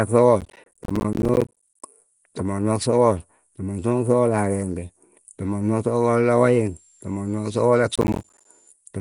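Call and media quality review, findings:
Nellymoser compression, whole clip: rough, hissy, smeared speech with plainly audible coding damage and no content above 10.6 kHz. Likely cause: Nellymoser Asao at a rate near 44 kbps, fixed bit allocation leaving weak bands noise-filled. Unlike a plain lowpass, the hiss rides inside the band.

Processor overload crackle, 0.41–1.83 s: gritty tearing from around fifty short silent gaps, fitting 10 ms buffers missed in a run. Again 7.96–8.45 s, around twenty gaps. Regular buffer-sized holes that stop when the load passes, not irregular packet-loss dropouts.

Switching supply whistle, 6.39–8.72 s: high tone between 7.1 and 7.5 kHz, about 35 dB below the speech, pitch wandering within that range. A switching power supply in audible burst mode or beating with another. A discrete tone that starts and stops, unlike broadband codec hiss. It overlaps the second crackle burst.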